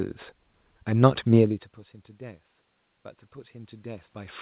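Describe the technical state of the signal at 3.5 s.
At 3.5 s the signal is in an automatic gain rising phase that runs from 3.33 s to the end of the clip. After the input dropped by about 22 dB, the gain control is steadily boosting level, so the speech and room noise swell together within the 4 kHz G.711 band.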